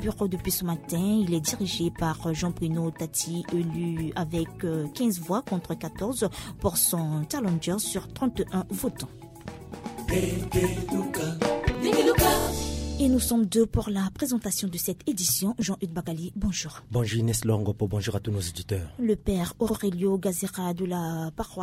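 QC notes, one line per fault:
10.21–10.26 s, repeated frames: A 46 ms block plays twice, a short stutter. That fits two frames sent again.
12.39–12.46 s, repeated frames: A 23 ms slice loops three extra times, adding 70 ms.
15.62 s, repeated frames: A 9 ms fragment plays twice, heard as a stutter.
19.69–19.76 s, repeated frames: A 70 ms block replays once, a hiccup that stretches the sound.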